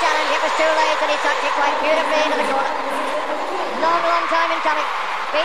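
From start to finish the sound runs about 1.38 times too fast and sits about 5.6 semitones high, which fits a wrong sample rate: 32 kHz material played at 44.1 kHz without conversion. Because tempo and pitch rise together, it is not a pitch-shift or time-stretch.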